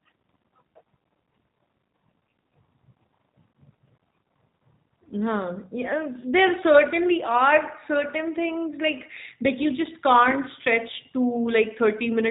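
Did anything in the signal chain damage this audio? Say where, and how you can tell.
Yes, at the codec stage, throughout the speech. G.729 coding is plainly audible: nothing above 4 kHz survives, and the voice sounds rough and synthetic. An 8 kbit/s coder rebuilds each 10 ms frame from a vocal tract filter, pitch predictor and a few pulses.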